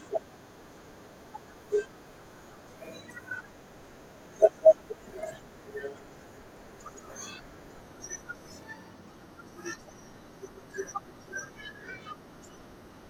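Speech, with a wrong sample rate from 7.82 s to the end. There the voice suddenly drops in pitch by about 1.5 semitones and slows to 0.919 of its proper speed. Pitch and tempo shift together. That is the mark of samples played at the wrong clock with no conversion. The ratio fits audio recorded at 48 kHz but played back at 44.1 kHz.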